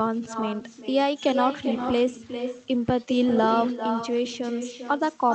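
From the first syllable to the end, the speech carries an echo with no canceller. The far end's loudspeaker feeds its microphone, and nothing removes the returning signal, so every phrase is shadowed roughly 0.4 s later by a copy about 8 dB quieter and thinner. In the waveform, each burst has a smaller twin trailing it. A spectrogram shows the same harmonic patterns repeated as fainter ghosts, all below the call path's 8 kHz ceiling.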